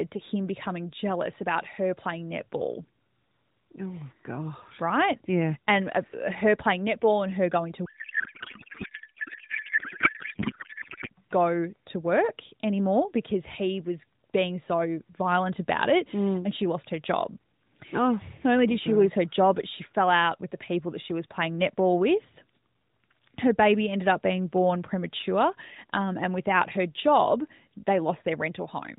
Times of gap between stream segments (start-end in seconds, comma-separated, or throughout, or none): none